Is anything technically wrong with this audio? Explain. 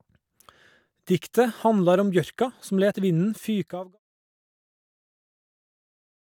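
No, the speech signal is technically sound, and the level tapering away from about 3.5 s to silence at 3.99 s is a deliberate, smooth editorial fade-out with no click or hard edge.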